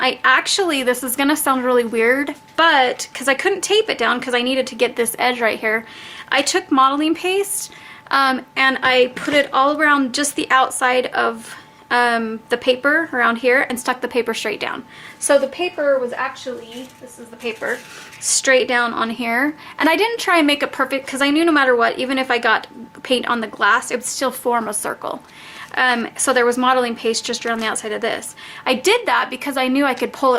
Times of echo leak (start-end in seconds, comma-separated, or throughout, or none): none